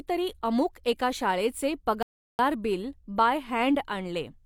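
At 2.03 s a rebuffering stall halts the speech for 0.36 s, then resumes exactly where it stopped; waveform and spectrogram show a clean blank gap until 2.39 s.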